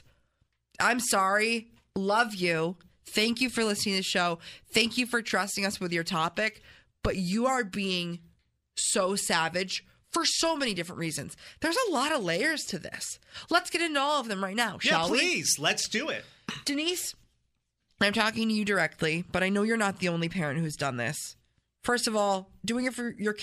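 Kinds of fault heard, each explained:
No faults detected in this speech recording.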